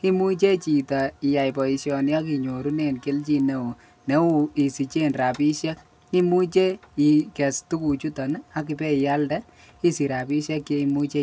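Across the whole speech clip there is a steady tick at 10 Hz, one every 100 ms. This is a resampler restarted on every block, likely converting 48 kHz down to 16 kHz. Each block edge lacks its true neighbouring samples, so it carries a small error. The ticks follow the speech and vanish in pauses.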